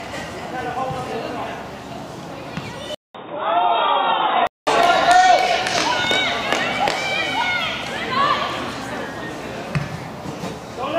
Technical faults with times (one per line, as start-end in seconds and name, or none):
2.95-4.67 input switched to a poorer device